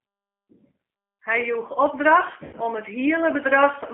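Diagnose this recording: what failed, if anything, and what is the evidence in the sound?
Codec stage. The speech sounds rough and slightly synthetic throughout, with plainly audible coding damage. Nothing lies below about 250 Hz or above 3.4 kHz. This is the G.729 codec. It rebuilds speech from a filter, a pitch predictor and sparse pulses, which fits an 8 kbit/s stream.

Network stage. VoIP packet loss concealed by the speech codec appears at 0.73 to 0.75 s and again at 2.45 to 2.56 s, just before "om it". Each gap becomes a stretched, fading extrapolation. The second span covers 80 ms of missing audio, which fits four lost packets, and the sound stays weak until the decoder recovers.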